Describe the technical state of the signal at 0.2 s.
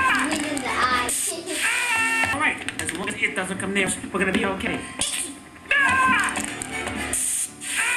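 The signal at 0.2 s is intact, with no audible fault at that moment.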